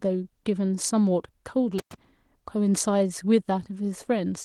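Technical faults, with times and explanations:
1.78 to 1.94 s, intermittent contact: the speech drops out abruptly, and the silence lasts about 97 ms. A loose plug or cable conductor lifts off its contact for that moment, so the signal path breaks. Crackle marks both edges of the dropout. That is the metal scraping as it separates and then touches again. While the line is open, a faint hiss remains in place of the signal.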